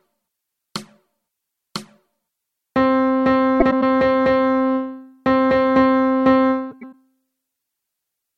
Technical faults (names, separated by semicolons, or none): frames out of order